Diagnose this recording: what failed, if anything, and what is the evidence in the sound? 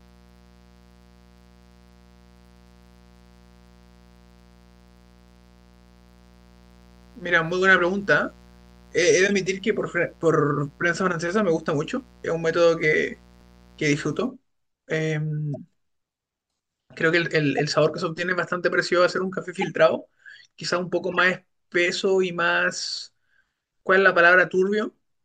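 Mains buzz from the analogue wiring stage runs from the start to 14.27 s, a steady raspy buzz at about 30 dB below the speech. Its fundamental is 60 Hz, with harmonics climbing well into the kilohertz range. That rasp sets it apart from a plain hum. Sharp switching spikes from a dimmer, rectifier or unshielded run enter twice per mains cycle, and that spiky shape builds the dense upper harmonics a clean sinusoidal hum would lack.

Corrupt frames decoded at the codec stage give short chirps and bursts of misplaced energy at 9.27–9.29 s, 15.54–15.57 s, 17.58 s, 19.55–19.64 s and 21.12–21.18 s. Damaged bits in compressed frames were decoded anyway, so wrong gains or misread codes put energy at the wrong frequencies for roughly the length of the affected frames. Unlike dropouts or concealment, the sound here is not lost or smoothed over. Something audibly wrong is played in its place.

A repeated buffer in the driver or buffer stage shows at 13.41 s as a tiny buzzing click. 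It lasts about 5 ms, which fits a 64-sample buffer of roughly 1.45 ms replayed four extra times. Fresh audio arrived late, so the device looped its last block, with a hard join at each repeat. Because the loop period is so short it buzzes rather than stutters, and its fixed repetition distinguishes it from the codec's spectrally scrambled bursts.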